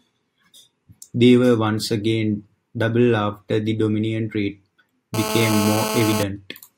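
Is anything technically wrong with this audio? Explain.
Yes. From 5.14 to 6.23 s a hard, raspy buzz at about 217 Hz with many harmonics sits over the speech, steady throughout and only about 5 dB below it. This is GSM phone buzz: a nearby phone on a call transmits bursts that the audio circuitry rectifies.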